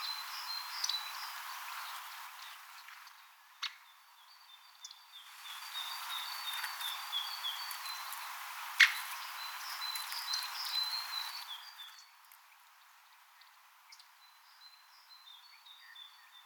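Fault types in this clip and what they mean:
Zipper noise: the gain moves in discrete 3 dB jumps rather than a continuous ramp, and each jump puts a small click into the waveform, so the level changes carry an audible ticking. It happens three times: a drop of about 15 dB from 1.86 to 3.34 s at roughly four steps a second, a rise of about 15 dB from 5.20 to 5.85 s at around ten a second, and a drop of about 15 dB from 11.24 to 11.98 s at around seven a second.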